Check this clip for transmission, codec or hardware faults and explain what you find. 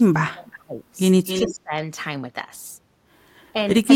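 Two faults appear in this speech: double-talk suppression twice, and a short echo leak between them.

From 0.0 to 0.82 s, and again from 1.45 to 1.73 s, the speech is pushed down by about 30 dB and then about 20 dB, over roughly 0.7 s and 0.3 s. This is speech suppressed in double talk, likely from an echo canceller that treated simultaneous talk as echo and attenuated everything. Unlike a dropout, the sound dips and recovers rather than vanishing cleanly.

From 1.26 to 1.55 s, an echo leak brings back a copy of the speech delayed by 268 ms, about 10 dB below the direct sound. A far-end loudspeaker echo likely slipped past cancellation. The delayed repeat distinguishes it from reverberation, which smears sound without a distinct gap.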